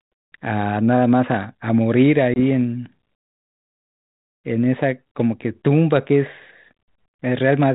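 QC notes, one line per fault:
2.34 to 2.38 s, packet loss on an ADPCM call: there's a hard-edged gap of about 20 ms, so roughly one packet went missing and got filled with silence. The decoder's adaptive predictor and step size drifted away from what the sender was tracking. When the speech comes back on the light 32 kbit/s G.726 coding, it's briefly slightly distorted, then settles over the next few tens of milliseconds.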